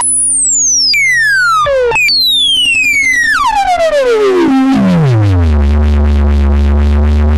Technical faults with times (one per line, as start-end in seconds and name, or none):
none